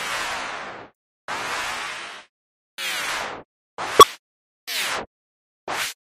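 At 3.99 to 4.04 s, damaged data in a compressed stream breaks the sound for about 56 ms. The decoder misreads corrupted frames, loses sync and hunts for the next valid header. On a spectrogram and waveform it shows as a brief disrupted band, an abrupt discontinuity in the surrounding texture.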